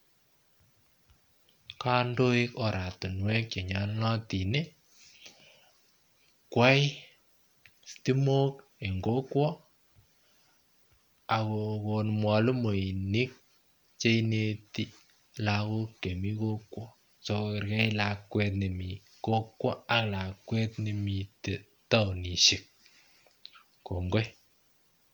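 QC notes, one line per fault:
No faults found in this speech recording. There is nothing to log against it.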